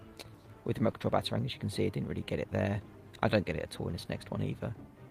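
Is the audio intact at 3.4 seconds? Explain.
Yes, the audio is intact at 3.4 seconds, with no dropout, click, distortion or other fault audible at that moment.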